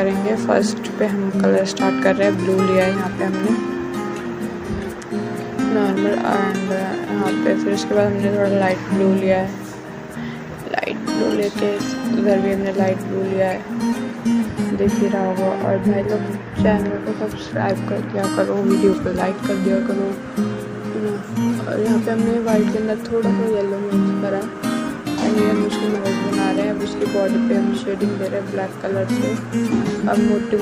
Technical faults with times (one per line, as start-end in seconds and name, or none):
none